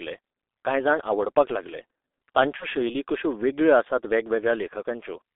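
Throughout, the speech carries heavy G.723.1 codec damage. The band runs only from about 300 Hz to 3.6 kHz, and the slow-updating voice model leaves the sound muffled and hoarse with smeared consonants, which fits a rate near 6.3 kbit/s.

From 2.57 to 2.67 s, just before "शैली कश्यो वेगळ्यो आसात", VoIP packet loss concealed by the speech codec breaks the flow. The decoder extends its last pitch and filter at falling gain, giving a brief stretched, fading smear that fits one lost 30 ms frame.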